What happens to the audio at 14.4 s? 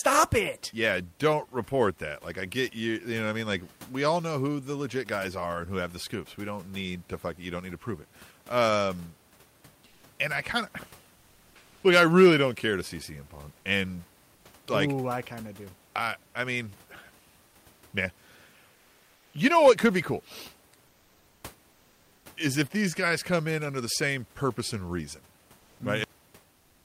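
The sender likely stopped transmitting during a pause, so the receiver generated comfort noise in place of the background from 14.35 to 14.45 s. For those 100 ms the room noise gives way to a steady, featureless noise, about 1 dB quieter.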